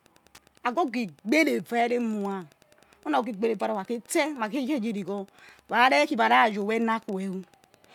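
Speech with Wi-Fi interference throughout: a tick every 102.4 ms, roughly 35 dB below the speech, from a nearby radio's beacon rectified by the audio circuit.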